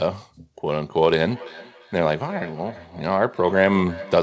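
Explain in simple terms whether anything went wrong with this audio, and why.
From 1.22 s to the end, the speech returns as a faint, thin, ringing repeat roughly a third of a second behind itself. This is feedback echo between two devices: one device's speaker plays the call aloud, and a nearby microphone picks it up again.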